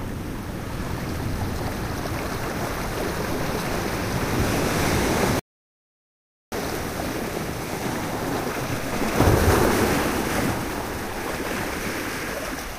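A recording of sounds cuts out abruptly at 5.39 s and stays silent for about 1.13 s, picking up again at 6.52 s. This is a playback stall, most likely the player running out of data or having its thread blocked, with output going silent until it recovered.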